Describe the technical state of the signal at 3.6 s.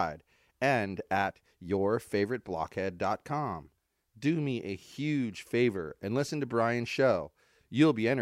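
At 3.6 s the speech signal is intact, with no dropout, clipping, distortion or other fault audible at that moment.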